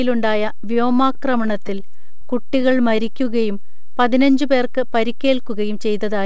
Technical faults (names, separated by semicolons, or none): DC offset; repeated stalls (stutter); jitter buffer slow-down; jitter buffer speed-up